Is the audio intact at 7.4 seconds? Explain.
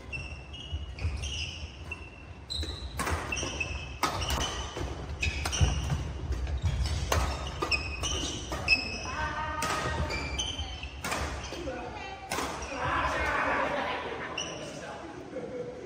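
No. A call bitrate drop from 4.38 to 8.89 s cuts the encoder from 64 to 28 kbps, so coarse coding sounds rough and watery, without the gaps of packet loss.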